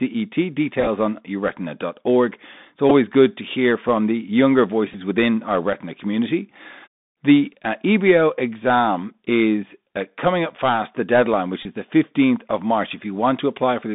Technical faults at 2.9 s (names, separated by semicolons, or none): Bluetooth CVSD headset codec; Bluetooth headset packet repeated